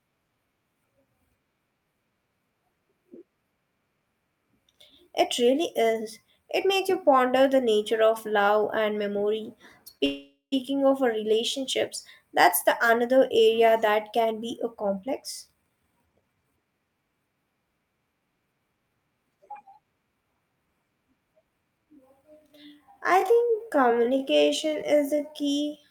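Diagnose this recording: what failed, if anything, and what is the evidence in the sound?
Short stall from a late packet at 9.97 to 10.02 s, a network and buffer fault. The jitter buffer ran dry, so the receiver held the last sound about 21 ms too long, then resumed with nothing lost.

Call audio freeze from 10.06 to 10.54 s. The sound is continued as a fading buzz that falls silent for about 110 ms, which points to packets likely held up in the network. Playback then resumes where it stopped, with roughly 465 ms of gap added.

Jitter buffer speed-up from 13.88 to 16.8 s and from 21.64 to 22.23 s. The receiver cut repeated pitch-period slices to drain excess buffered delay, so speech runs about 10% fast at unchanged pitch. Roughly 300 ms is removed in the first stretch and about 70 ms in the second.

Time-stretched section from 22.42 s to the end. The pace abruptly drops to about two-thirds speed while the pitch holds, and the speech drags. 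The likely cause is software repeating short slices to lengthen the audio.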